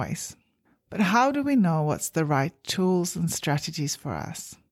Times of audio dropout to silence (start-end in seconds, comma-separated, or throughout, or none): none